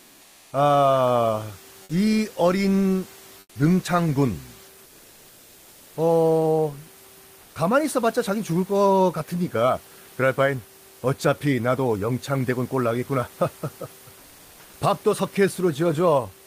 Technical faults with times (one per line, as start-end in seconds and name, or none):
0.00-0.51 comfort noise in place of the background
3.39-3.55 comfort noise in place of the background
4.85-5.95 comfort noise in place of the background
7.41-7.55 comfort noise in place of the background
14.19-14.73 comfort noise in place of the background